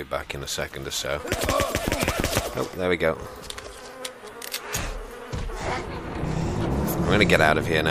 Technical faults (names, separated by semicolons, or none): periodic USB or driver dropouts